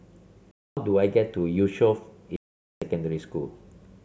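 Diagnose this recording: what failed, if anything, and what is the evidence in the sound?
Driver or buffer underrun: blocks of digital silence at 0.51–0.77 s and 2.36–2.82 s show a flat waveform and empty spectrogram columns.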